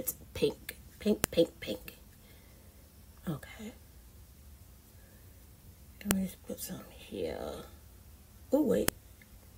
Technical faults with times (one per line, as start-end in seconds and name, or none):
1.24 file header played as audio
6.11 file header played as audio
8.88 file header played as audio